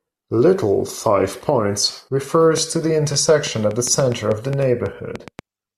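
Likely interference from nearby equipment or a faulty connection or power supply injects a train of clicks from 2.58 s to 5.40 s: around fifteen near-identical pulses, about 4.6 per second but unevenly spaced, popping roughly 10 dB above the speech and ticking through pauses too.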